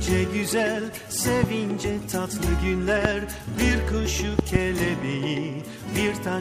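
Sharp loud pops jump well above the sound at 1.43–1.46 s and 3.05–3.07 s, then a double pop at 4.39–4.58 s, the last one louder. Each is likely a sudden voltage spike from a plug, switch or static, with the sound continuing beneath.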